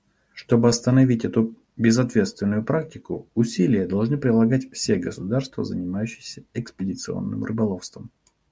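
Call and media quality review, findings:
Nothing to flag on this one: no dropouts, glitches or distortion turned up anywhere in the speech.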